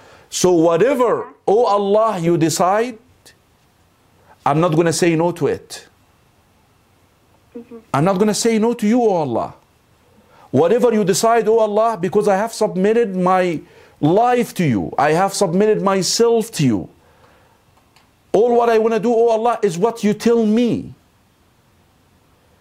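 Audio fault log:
10.66 s and 13.54 s, bit error spike: a single sample jumps, peaking at about -31 dBFS and then about -19 dBFS, as a flipped bit shifts its value by a power of two before it snaps back. Each is a sharp tick, a one-sample needle on the waveform and a thin full-height line on the spectrogram.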